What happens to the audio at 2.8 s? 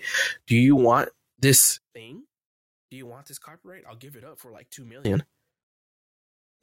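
At 2.8 s the speech drops by about 25 dB and turns faint, a state that runs from 1.78 s to 5.05 s. The likely cause is one channel inverted: one side of the stereo pair has its polarity flipped, so when the two are summed to mono the voice and background cancel. What survives is only the small difference between the channels, a faint residue of the speech.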